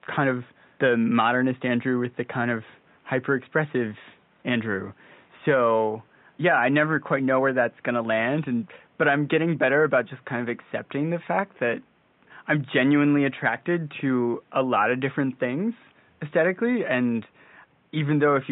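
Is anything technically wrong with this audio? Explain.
No, nothing is technically wrong with this audio.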